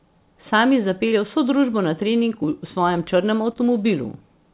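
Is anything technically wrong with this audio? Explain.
Yes, there are two spots of short concealed packet loss in this speech, at 1.08 to 1.15 s and again at 3.52 to 3.58 s. Each time roughly 40 ms of the call didn't arrive in time, so the receiver papered over the gap by extending the last bit of sound, pitched if voiced and noise if not, for about 35 ms, then crossfaded back. You hear a quick smear or wobble there. The narrowband G.711 call path, with nothing above 4 kHz, comes through as expected.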